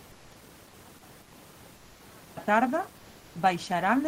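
From 0.0 to 2.37 s the speech nearly disappears when heard in mono, dropping by about 37 dB to a faint residue. This is one channel inverted: the likely cause is one stereo channel carrying reversed polarity, so the shared centre content cancels.

Within that span, at 0.11 to 0.35 s, 1.22 to 1.32 s and 1.76 to 1.99 s (about 240, 100 and 230 ms), the room background becomes a smoother noise, about 1, 4 and 2 dB quieter. This is comfort noise in place of the background, likely from Opus DTX synthesising noise during pauses.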